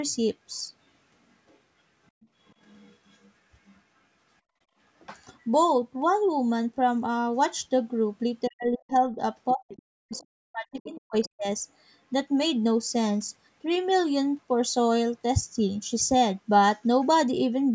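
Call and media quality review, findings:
Other side's voice leaking through, 1.32–3.81 s: faint second talker under the speech, roughly 30 dB down. Likely residual loudspeaker echo the echo canceller didn't fully remove from the mic feed.

Same leak, shorter bursts at 9.69–10.23 s (louder, around 20 dB down), 10.84–11.29 s (around 30 dB down) and a brief blip at 17.01–17.07 s (very low, around 35 dB down). Same residual-echo mechanism; the 9.69 s burst is the loudest.

Speech suppressed in double talk, 8.48–11.47 s: near-end voice is turned down while the far side talks, about two seconds affected in total, deepest drop around 40 dB. Likely the echo canceller attenuating everything when it couldn't tell the talker from echo.

Worth noting the leak bursts at 9.69 s and 10.84 s sit inside that suppression window, so the canceller was ducking the wanted talker while still letting echo through. 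The 8 kHz top end is just the normal call mic processing band limit, not a fault.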